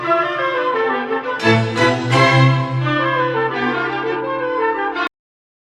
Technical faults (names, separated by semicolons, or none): cut-off end